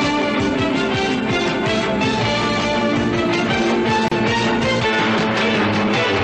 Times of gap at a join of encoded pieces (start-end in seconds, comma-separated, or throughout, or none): 4.08-4.11